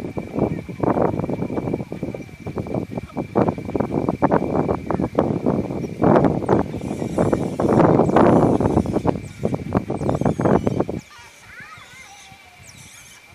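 No dropouts, clicks, distortion or other technical faults are audible anywhere in the recording.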